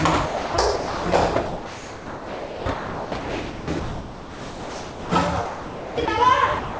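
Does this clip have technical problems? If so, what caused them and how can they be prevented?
Yes. The sound is chopped by the voice detector from 0.26 to 1.06 s, 1.46 to 5.12 s and 5.46 to 6.08 s. Real sound keeps giving way to steady synthetic noise, about 3.4 s of it in the long middle stretch. The likely cause is a sender voice detector toggling on sound it judged to be background.

From 6.60 s to the end, the sound is dropped by the voice detector. The last 0.2 s becomes comfort noise and never returns. The detector again likely misread the sound as background and stopped sending.

Both faults can be prevented by disabling the voice detector or lowering its threshold for non-speech audio.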